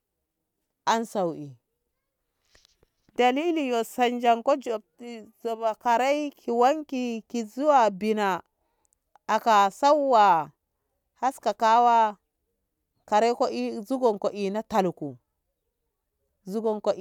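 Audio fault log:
Nothing to log here, as the speech rolls along without a single fault turning up anywhere in the clip.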